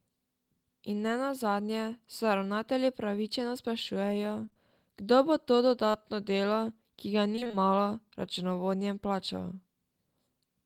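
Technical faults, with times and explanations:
4.45–4.57 s, short concealed packet loss, three in a row: between "upravičeno sprašujejo" and "kdo bo to", three 20 ms holes are patched by extending the preceding speech, leaving a brief smeared wobble.
5.91 s, short concealed packet loss: another 20 ms of audio arrives too late, and the receiver bridges it by continuing the last sound before blending back, giving a brief smear.
7.36–7.55 s, repeated packet loss (robotic sound): after "delo ki ga" and before "malo računovodjem plačal", five gaps of up to 25 ms follow closely, so half the stretch is synthesized and sounds choppy.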